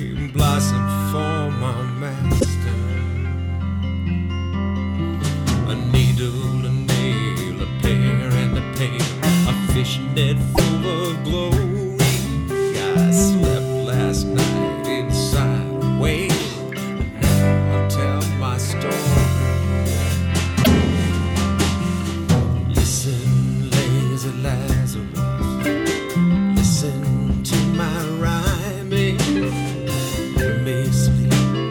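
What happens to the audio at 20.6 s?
A brief glitch from 20.60 to 20.67 s: damaged data in the compressed stream, where corrupted frames make the decoder lose sync and hunt for the next frame header.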